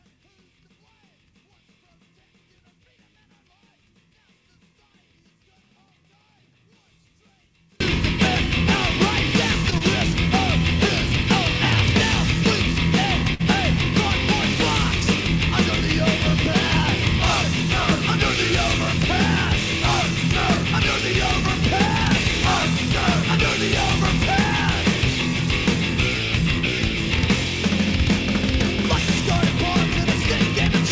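From 0.0 to 7.8 s, one stereo channel is likely inverted, so summing to mono cancels the shared content and drops it by about 40 dB, leaving a faint residue.

At 9.70 to 9.74 s, a short stall from a late packet emptied the jitter buffer, so the last sound is stretched by 20 ms with nothing lost.

At 9.78 to 9.82 s, short concealed packet loss removed 20 ms, which the receiver filled with 22 ms of extrapolated sound, heard as a brief smear.

At 13.34 to 13.41 s, a second late-packet stall holds the sound for 53 ms. All of this passes through a G.722 call path with nothing above 8 kHz.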